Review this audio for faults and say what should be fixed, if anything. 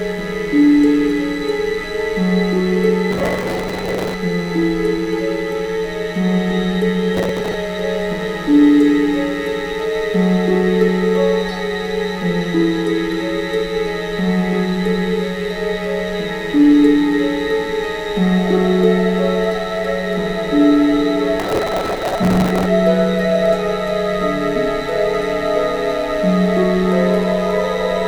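Mains buzz runs throughout, a raspy 50 Hz hum roughly 25 dB below the sound. Switching spikes twice per mains cycle appear on a spectrogram as evenly spaced harmonic lines reaching several kHz. Prevent it with proper shielding, grounding and a clean supply away from dimmers.

Processor overload crackle tears through the sound at 3.11–4.14 s, 7.17–7.54 s and 21.40–22.65 s. Many missed deadlines, consistent with buffers of a few milliseconds, replay stale audio with hard edges. These show as dense vertical streaks on a spectrogram and jagged discontinuities on the waveform. Prevent it by enlarging the buffer or reducing the processing load.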